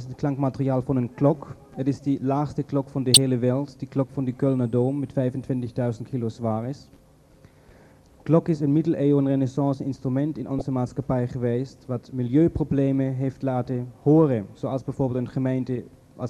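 A corrupt frame decoded twice in the sound, at 3.14–3.17 s and 10.59–10.62 s. Each is a brief burst of misplaced energy, the first loud (about -5 dBFS) and the second quieter. Damaged compressed data was decoded anyway, and the 30 ms length suggests a frame or two hit.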